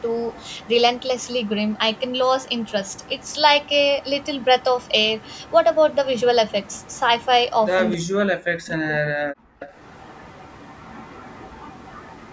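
A faint, delayed copy of the speech trails the talker through the opening stretches, from 0.0 to 2.1 s, 2.45 to 3.69 s, 4.02 to 5.52 s and 5.94 to 7.5 s, each time about 268 ms behind and roughly 30 dB down. This is echo leak. The far end is likely playing the call on a loudspeaker, and its echo canceller let some of what its microphone picked up slip back into the line.

From 7.96 to 9.42 s the talker's level falls sharply and unevenly, by as much as about 40 dB, for roughly one and a half seconds. This is speech suppressed in double talk. With both sides talking at once, the echo canceller likely could not tell the near talker from the loudspeaker echo, so it turned everything down together.

From 9.6 s to the end at 12.32 s the echo leak returns with the same 268 ms delay. It is a little stronger here, at about 25 dB below the speech, so the trailing copy is easier to pick out against the band-limited call audio, which carries nothing above 8 kHz.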